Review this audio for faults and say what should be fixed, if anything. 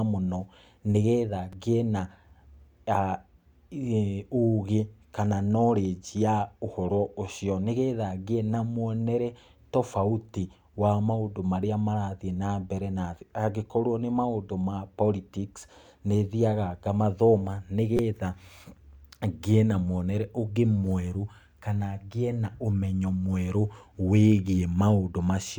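Repeated buffer at 1.53 s, just after "mũno nĩgetha", and again from 17.97 to 17.99 s. Fresh audio reached the output late, so the device replayed its last 5.3 ms block, which fits a 256-sample buffer. The first event plays it once more, a single click. The second repeats it four times, a brief buzz that replaces about 20 ms of speech. Enlarging the output buffer or raising the audio thread's priority would prevent these underruns.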